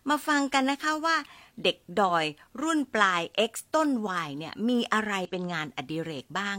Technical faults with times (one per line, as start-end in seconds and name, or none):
2.05-2.10 damaged data in a compressed stream
5.25-5.29 damaged data in a compressed stream